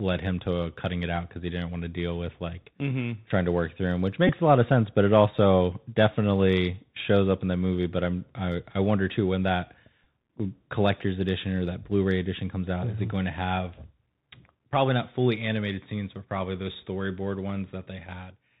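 Throughout, the Bluetooth CVSD headset codec cuts everything above 4 kHz. S sounds turn scratchy, and a granular hiss sits under the speech. At 4.28 to 4.32 s, a Bluetooth headset packet is repeated, giving a brief buzz near 267 Hz, which fits about four lost packets. Another short buzz comes at 10.04 s.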